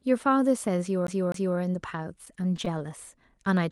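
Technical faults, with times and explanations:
1.07 to 1.58 s, CD stuck on one turn: a chunk of the speech about 254 ms long plays, then jumps back and plays again, twice over, with a tiny mute at each jump. That's the classic skipping-disc stutter. A scratch knocks the laser back one track at the same point on every rotation, so you get the same quarter-second looping at an even rate rather than anything random.
1.90 to 2.82 s, repeated stalls (stutter): nine little hitches where the audio catches and drags instead of flowing, adding up to about 86 ms of filled-in sound, roughly 9 percent of that stretch. Packets were showing up late or slower than playback through the Opus call path, so the jitter buffer kept running dry. Each time, the receiver stretched the last sound to cover it. The longest hold is only 13 ms, and nothing actually goes missing.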